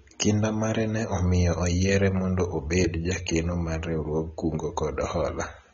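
From start to finish the speech sounds dull and smeared, with nothing above about 7.6 kHz and a warbling, fizzy texture on sustained sounds and sibilants. This is likely AAC compression, AAC-LC at a low bitrate that fits around 24 kbps. With so few bits, the encoder cuts the top of the spectrum and quantises the remaining frequency lines coarsely, leaving gaps that shift from frame to frame and give the plainly audible damage.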